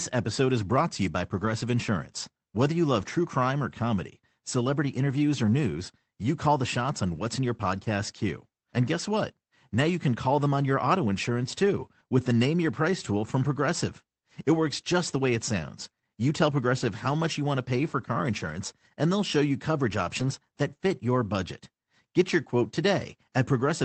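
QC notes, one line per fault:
1.37–1.47 s, 2.99–3.01 s and 20.15–20.29 s, lost packet rebuilt from error correction: short rough, noisy patches with no dropout, as the Opus decoder played low-bitrate copies from following packets.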